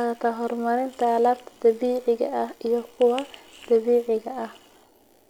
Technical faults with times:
none

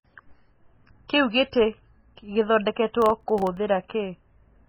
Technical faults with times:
0.00-4.69 MP3 compression
3.02-3.57 processor overload crackle

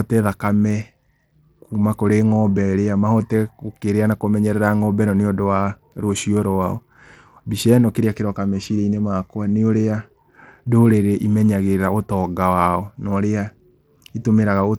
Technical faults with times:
0.00-14.78 Bluetooth SBC compression

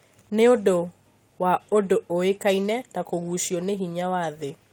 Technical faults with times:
none

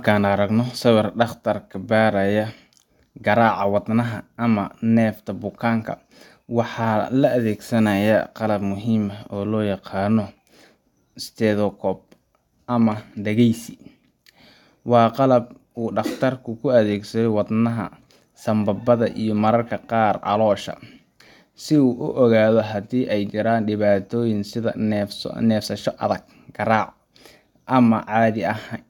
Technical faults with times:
none

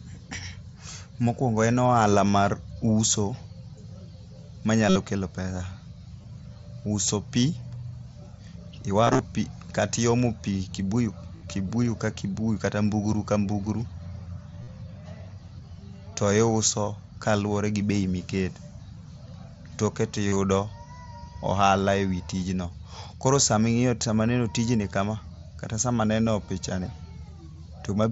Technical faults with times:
2.32 concealed Bluetooth headset packet loss
4.89-4.96 concealed Bluetooth headset packet loss
6.22 concealed Bluetooth headset packet loss
9.04-9.19 concealed Bluetooth headset packet loss
11.37-11.41 concealed Bluetooth headset packet loss
14.63-14.68 concealed Bluetooth headset packet loss
20.28-20.36 concealed Bluetooth headset packet loss

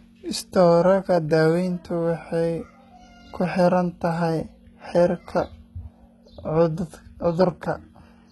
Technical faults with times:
0.00-8.31 HE-AAC compression

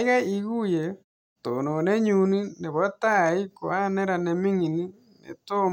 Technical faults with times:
none

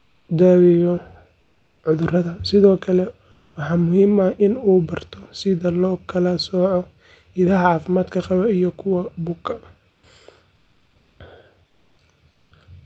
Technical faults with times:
0.00-0.27 comfort noise in place of the background
1.39-1.83 comfort noise in place of the background
3.31-3.55 comfort noise in place of the background
9.89-10.03 comfort noise in place of the background
10.55-11.19 comfort noise in place of the background
11.67-11.97 comfort noise in place of the background
12.31-12.51 comfort noise in place of the background

